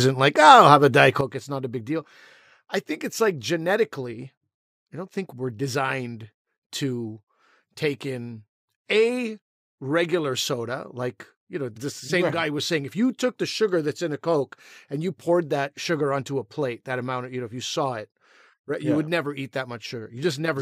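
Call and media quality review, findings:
Sudden gain jump at 1.21 s, holding to end of clip. Likely an unramped digital gain change in the send path, such as a setting or bit shift applied between samples. Speech and background noise drop together by about 10 dB, instantly.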